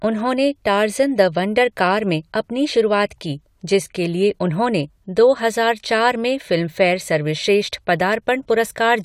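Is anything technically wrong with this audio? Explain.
No, nothing technically wrong turns up anywhere in this speech recording.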